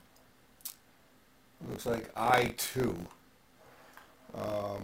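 Buffer tearing runs through the whole clip: a steady robotic rattle at 50 Hz, there only while sound is playing. That rate points to a buffer period of about 20 ms. The program filling the ring buffer and the hardware reading it have drifted into each other, so a small slice of each period, a few percent, replays audio from roughly 40 ms earlier, with hard joins on both edges producing the buzz.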